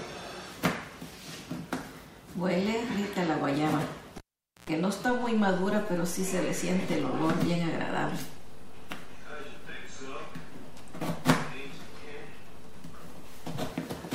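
At 4.18 s a live cable is pulled and plugged in again, interrupting the signal path until 4.70 s. A pop opens a gap of about 470 ms of near silence, then roughly 107 ms of 60 Hz mains buzz as only the tip makes contact, and a second pop as the sound returns.

At 5.09 s a DC step shifts the waveform's zero line by about -34 dBFS, as an offset input or converter recalibration would, and the offset holds until 13.70 s. Each edge of the shift is heard as a low thump while the sound carries on unchanged between them.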